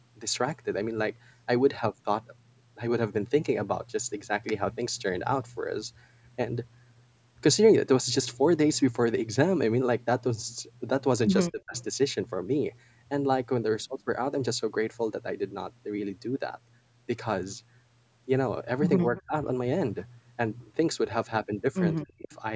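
A speech recording of a call, band-limited at 8 kHz by the call's microphone processing, with speech suppressed in double talk three times: 11.51–11.75 s, 19.11–19.35 s and 22.03–22.32 s. The level falls by as much as roughly 35 dB at the first and roughly 25 dB at the others. This is likely the echo canceller ducking the near talker while the far side spoke, because it could not tell that voice from loudspeaker echo. On a waveform these show as sudden notches in the envelope. On a spectrogram the harmonics fade or break into patches, with the upper frequencies going first. Echo leak appears at 11.77–11.83 s, 19.16–19.22 s, 22.00–22.04 s and 22.32–22.36 s as faint fragments arriving 239 ms late, about 20 to 30 dB below the speech. These are probably residual loudspeaker pickup that the canceller failed to subtract. On a spectrogram they look like weak smears copying earlier harmonic patterns, sitting right beside or inside the suppressed stretches.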